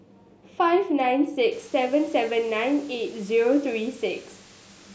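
From 1.52 s to the end at 4.95 s, the speech carries low bit depth with dither: the samples are rounded to about 7 bits, but noise added before rounding turns the error into a steady, even hiss sitting roughly 30 dB below the speech. Unlike undithered truncation, there is no gritty distortion that follows the speech or drops out in quieter moments. The hiss stays constant and clean-edged.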